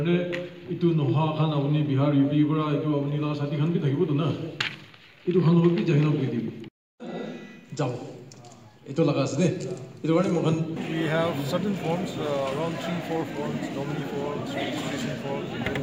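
No technical faults can be heard anywhere in the audio.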